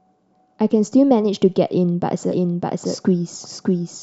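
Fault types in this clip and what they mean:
Doubled audio track: from 2.32 s to the end, a second copy of the speech runs about 0.7 s behind at roughly equal level, likely from an out-of-step duplicate.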